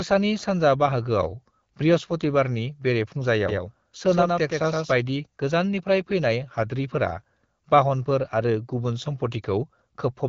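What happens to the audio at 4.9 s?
At 4.9 s the sound is near the end of a doubled audio track that runs from 3.49 s to 4.93 s. A second full-band copy trails the original by roughly a tenth of a second, about 5 dB quieter, with no decay or room colour, giving a hard slapback echo that cuts off abruptly at 4.93 s. The likely cause is the same signal captured again through a slower path and mixed back in.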